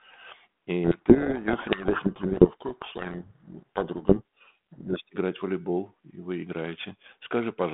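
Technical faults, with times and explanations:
0.84–5.0 s, codec payload misread: the G.726 code words are decoded with their bit order reversed, so each sample's difference code is misread. The speech is buried under harsh, grinding distortion until the packing matches again, in a telephone band from 32 kbit/s G.726 coding.
6.50–7.73 s, periodic clock jitter: the converter clock wobbles at around 1 kHz, adding sidebands spaced roughly 1 kHz above and below every component of the speech. Higher components are hit hardest, giving a rough, metallic edge that disappears in pauses.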